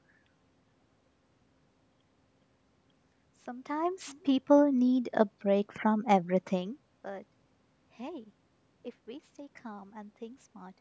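A gain change applied in coarse 1 dB jumps with no smoothing between them causes zipper noise twice in this speech. From 3.56 to 4.02 s the level climbs by about 15 dB, and from 6.48 to 6.94 s it drops by about 20 dB, each time in roughly fifty steps a second. Every jump leaves a tiny click, so while the level moves a fine ticking, zipping texture rides on top of the speech.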